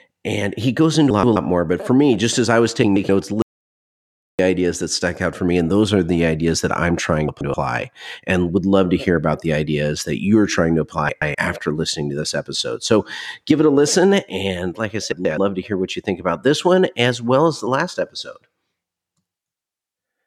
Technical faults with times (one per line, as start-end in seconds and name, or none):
1.10-1.36 frames out of order
2.83-3.09 frames out of order
3.42-4.39 audio dropout to silence
7.28-7.54 frames out of order
11.09-11.35 frames out of order
15.12-15.38 frames out of order